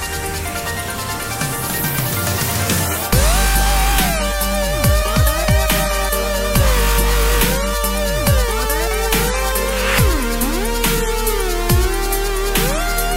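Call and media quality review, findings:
Nothing to flag on this one; no dropouts, glitches or level problems turned up anywhere in the recording.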